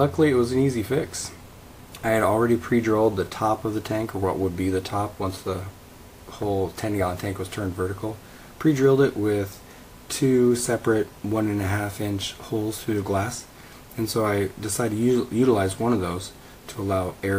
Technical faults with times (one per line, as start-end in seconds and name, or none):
none